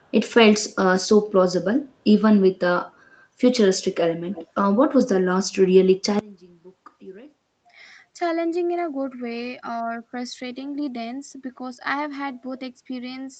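From 4.33 to 4.47 s there is a brief echo leak. A faint, delayed copy of the speech follows about 0.3 s behind the original and sits roughly 20 dB below it. The likely cause is a far-end loudspeaker whose echo canceller let a scrap of the playback back into its microphone. On a spectrogram it shows as a weak repeat of the preceding harmonic pattern, shifted later in time. Like the rest of the audio, it is capped at the 8 kHz call bandwidth.

At 6.19 s the level suddenly drops by about 26 dB and stays down to the end of the clip. What remains is a faint residue of the speech. This points to one channel inverted, likely a polarity flip in one side of the stereo path. When the two channels are summed to mono, everything common to both cancels, so the centred voice largely disappears. On the waveform the amplitude shrinks abruptly to a sliver. The spectrogram fades across the band.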